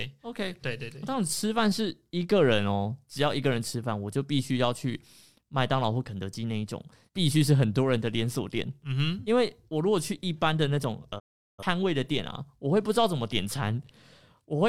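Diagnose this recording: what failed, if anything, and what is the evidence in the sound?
Digital broadcast dropout in reception: failed frames made the receiver mute, so speech fades out within 20 ms at 11.18 s and stays silent until 11.63 s.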